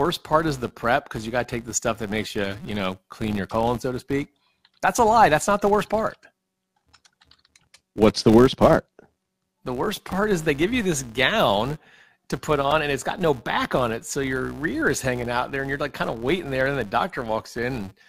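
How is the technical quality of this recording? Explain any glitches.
The recording has two faults: a constant low buzz from start to finish, and one brief glitch in the later part of the speech.

Filter restarted on every block, throughout: the filter drops its stored state at each block boundary, so every block starts from silence with a small transient. Repeating at 188 Hz, which fits a 256-sample block, these ticks merge into a buzz that rises and falls with the speech level.

Repeated buffer, at 12.71 s, between "this gown to put" and "and it's got no": fresh audio arrived late, so the same tiny chunk, about 1.45 ms long and consistent with a 64-sample buffer, replayed several times with hard joins. It sounds like a short click-buzz, with a few milliseconds of audio lost.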